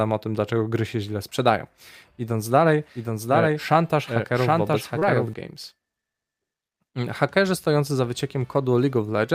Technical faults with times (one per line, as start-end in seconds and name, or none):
2.95-5.33 doubled audio track
4.99-5.03 short concealed packet loss